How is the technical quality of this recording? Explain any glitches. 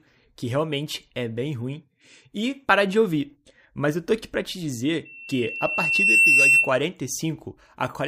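The speech recording has one clear technical fault. From 5.05 to 6.78 s, loudspeaker feedback squeal: the microphone re-amplifies the loudspeaker's output, and a 2.7 kHz tone swells over about a second to roughly 10 dB above the speech.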